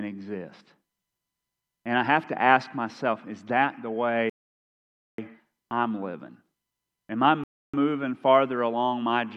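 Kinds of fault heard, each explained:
Bluetooth stall: silence of 0.89 s after "myself is that the" and 0.3 s at 7.44 s, likely delayed packets emptying the headphone buffer.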